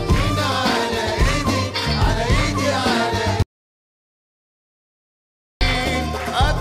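At 3.43 s the sound stops dead and stays gone until 5.61 s, a gap of about 2.18 s. This is an audio dropout to silence. The input was likely lost through a disconnected device, a failed link or a stray mute, while recording carried on writing silence. No room tone remains, so the cut and the return both land abruptly mid-flow. On a waveform the trace flattens to a flat line, and a spectrogram shows a blank block across all frequencies.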